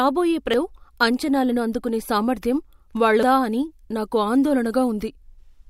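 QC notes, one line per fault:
0.54 s and 3.23 s, damaged data in a compressed stream: two brief, isolated blips in the speech, the first just before "అంచనాలను అందుకునే సామర్థ్యం". At each point a stretch of the coded bitstream was corrupt, so the decoder misread those frames, lost sync and had to hunt for the next valid frame header. On a spectrogram each shows as a thin vertical break, and the waveform has a short irregular disruption that breaks the surrounding envelope.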